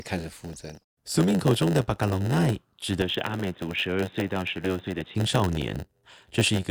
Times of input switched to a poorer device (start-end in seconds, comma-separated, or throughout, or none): 3.02-5.15